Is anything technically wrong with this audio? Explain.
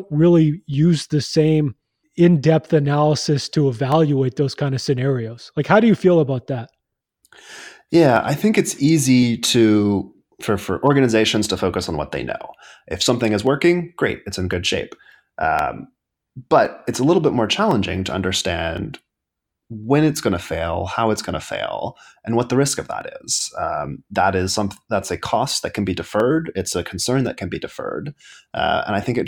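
Yes. From 0.74 s to 28.3 s, about thirty clicks recur every 1.06 s during the speech, likely clock drift buffer slips: an offset of about 300 ppm drops or repeats roughly 15 samples each time.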